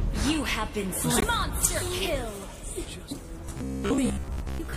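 MP3 compression runs throughout: the top end sounds watery and swirly, with smeared attacks. This likely comes from an encoder short of bits, dropping weak frequency lines frame by frame, which fits a low bitrate near 64 kbps.

Damaged data in a compressed stream appears from 1.19 to 1.24 s. The decoder misreads corrupted frames there, loses sync, and searches for the next valid frame header.

Robotic sound from repeated short buffers runs from 3.46 s to the end at 4.76 s. The sound becomes a rigid metallic buzz at 66.7 Hz as short stretches of audio repeat for most of that span, consistent with a 15 ms buffer replaying while the real audio is skipped.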